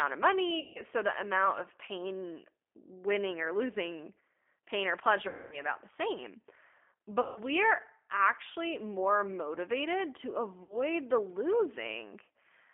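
Across the whole speech clip the G.729 codec is plainly audible. The line is held to roughly 250 Hz to 3.5 kHz, and the 8 kbit/s rebuild of the voice from a filter, pitch predictor and a few pulses adds a rough, synthetic grain. That grain separates it from simple band-limiting, which only sounds muffled.

VoIP packet loss concealed by the speech codec then strikes four times, at 0.60–0.83 s, at 5.28–5.64 s between "or losing pain or" and "the same", at 7.21–7.40 s just before "we're actually more motivated", and at 10.63–10.76 s just after "actually more motivated to". About 150, 240, 150 and 60 ms of audio went missing. The decoder stretches its last pitch and filter into a buzzy tone or coloured noise that fades and stays weak briefly afterwards, rather than leaving the clean silent gap of a plain dropout.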